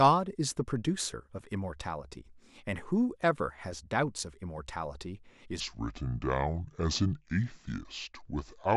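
A section at the wrong speed runs from 5.60 s to the end at 8.77 s. From that point the speech plays at 0.673 times its recorded rate, so pitch and tempo drop together: voices fall by roughly seven semitones, turning deep, slow and drawn out, with the shift arriving abruptly rather than gliding in. The likely cause is this stretch being played back or resampled against the wrong clock, stretching it by about half again.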